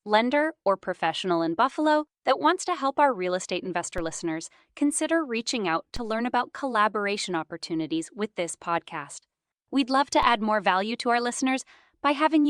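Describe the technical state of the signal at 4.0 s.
At 3.98 s, between "our real estate investor" and "listeners consider reaching out", there is a DC step. The waveform's zero line suddenly jumps by about −22 dBFS and then sinks back toward centre within a few tens of milliseconds, as a 5 Hz high-pass would drain it. The jump is heard as a short low thump beneath the speech. On a waveform the baseline visibly lurches and curves back. A spectrogram shows a brief vertical smear strongest at the lowest frequencies.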